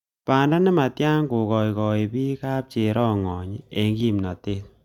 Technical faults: none

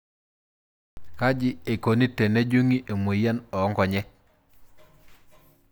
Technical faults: cut-off start

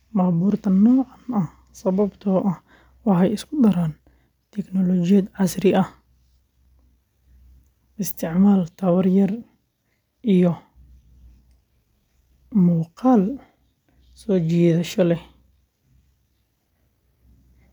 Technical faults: none

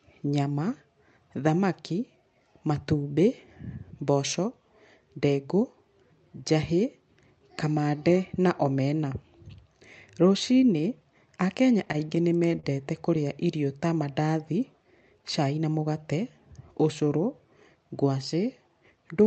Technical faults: repeated stalls (stutter)

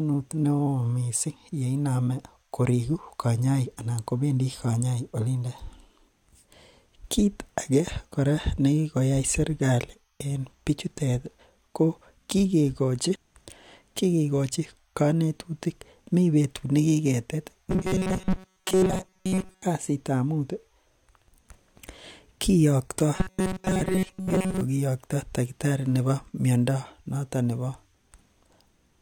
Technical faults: robotic sound from repeated short buffers

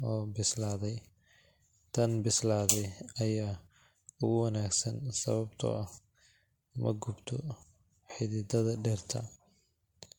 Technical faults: generation loss

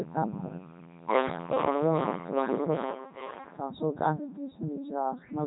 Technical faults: Codec 2 vocoder

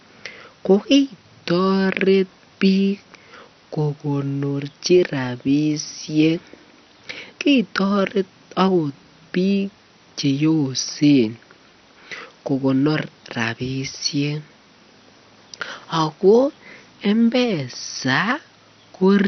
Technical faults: MP2 compression

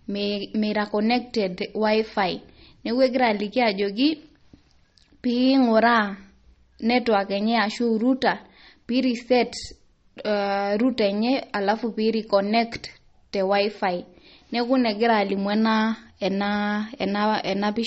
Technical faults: MP3 compression

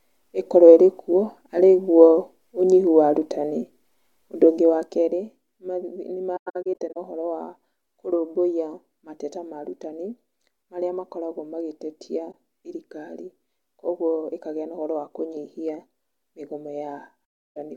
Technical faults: AAC frame loss with muting

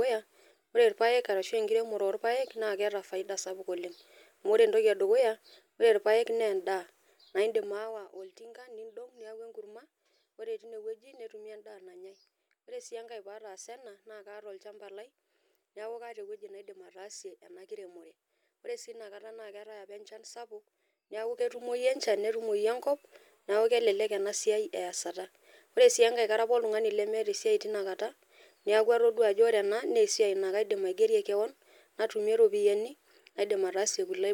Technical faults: zipper noise

